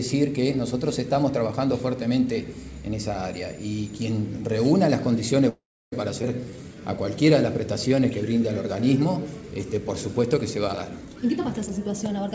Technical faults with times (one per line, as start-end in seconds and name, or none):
5.49-5.93 call audio freeze
6.22 skip ahead
6.45-7.29 jitter buffer slow-down
7.88-8.40 jitter buffer slow-down
11.05-12.28 jitter buffer speed-up